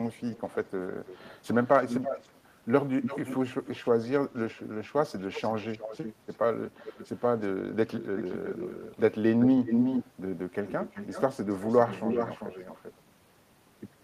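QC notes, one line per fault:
0.17–0.71 s, 1.05–2.4 s, 3.02–9.01 s, 9.41–10.11 s and 10.65–13.01 s, echo leak: a far-end echo canceller likely failed to remove its loudspeaker's pickup, so the speech returns as a delayed copy, trailing by about 316, 324, 349, 370 and 382 ms in turn. The echo starts faint, around 20 dB under the speech, then sits near 10 dB below, rises to roughly equal level at 9.41 s and stays close behind to 13.01 s.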